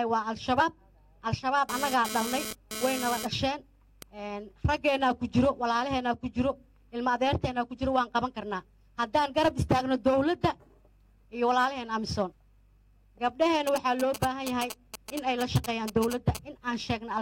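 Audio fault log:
0.56–0.61 s and 12.26–12.33 s: damaged data in a compressed stream. Each is a brief chirp or squawk. Corrupted bytes in the compressed stream make the decoder misread those frames, lose sync and jump to the next valid frame header.
1.69–4.03 s: GSM phone buzz. A hard, raspy buzz at about 217 Hz, rich in harmonics and about 8 dB below the signal, that comes and goes. A nearby 2G phone transferring data emits radio pulses that the audio circuitry rectifies into sound unrelated to the programme.
13.67–16.37 s: GSM signalling bursts. A galloping dit-dit-dit of short 217 Hz buzzes, roughly 10 dB below the signal. A nearby 2G phone is sending only brief groups of radio bursts while signalling, and the audio circuit rectifies each group into this pattern.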